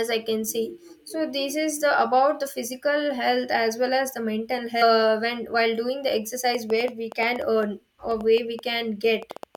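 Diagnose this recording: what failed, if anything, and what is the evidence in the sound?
A train of clicks starts at 6.55 s, just after "doing the", and runs to the end at 9.56 s: about twenty similar pops, irregularly spaced at roughly 5.7 per second, peaking about 5 dB above the speech. They continue through pauses, which rules out codec artefacts tied to the signal. Likely cause: interference or a struggling interface at the analogue or driver stage.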